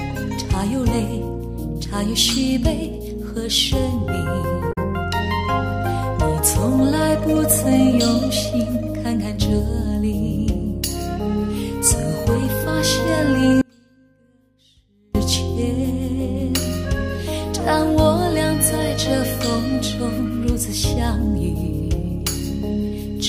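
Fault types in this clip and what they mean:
Damaged data in a compressed stream: corrupted bytes in the encoded stream make the decoder misread frames and lose sync while it searches for the next valid frame header. The result is a brief disturbance from 4.69 to 4.78 s.
Audio dropout to a faint residue: the wanted signal was likely lost upstream while the path after the break stayed live. From 13.62 to 15.15 s the sound cuts out abruptly for about 1.5 s, leaving only a faint sound about 35 dB down.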